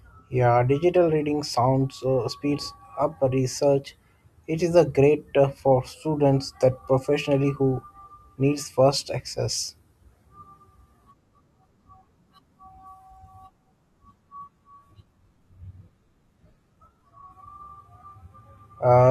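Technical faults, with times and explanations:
14.21 to 19.10 s, adaptive stream at a lower bitrate: the player switched without a gap from a full-rate AAC stream to a much leaner one, consistent with HE-AAC near 20 kbit/s, so the speech's codec artefacts abruptly thicken.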